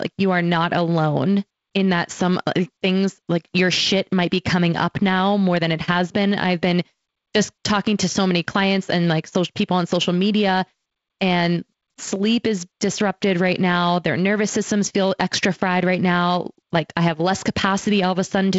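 At 12.16 s, between "on social media and" and "is disrupted right now", a single sharp click is heard. It is likely dropped samples: about 0.7 ms of the stream is missing, so the waveform jumps abruptly and a thin vertical line runs across the spectrogram, up to the G.722 wideband band limit near 7.7 kHz.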